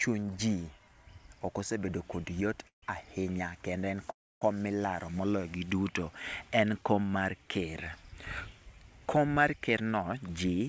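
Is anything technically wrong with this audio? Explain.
Yes. The speech has two call audio freezes and a jitter buffer speed-up near the end, all carried over a call path whose band stops at 8 kHz.

Call audio freezes occur at 2.68 to 2.84 s, just before "ahinya kendo", and at 4.10 to 4.43 s, just before "kom milaro". They fill 144 ms and 310 ms. Each begins with a brief fading tail carried on from the last sound, then drops to silence for about 110 ms and 270 ms. The likely cause is packets held up in transit, emptying the jitter buffer, so the receiver stretched what it had. Nothing is lost: the speech resumes exactly where it stopped, arriving 144 ms and 310 ms later. That distinguishes a freeze from packet-loss dropouts, which cut material out.

The jitter buffer speed-up runs from 9.70 s to the end at 10.68 s. The speech plays at 110% speed with its pitch unchanged. The receiver, holding more buffered audio than it wanted, repeatedly trimmed pitch-period-sized slices, removing about a tenth of a second in total to pull the delay back down. 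The unchanged pitch separates it from a resampling or clock-rate error, where speeding up would also raise the voice.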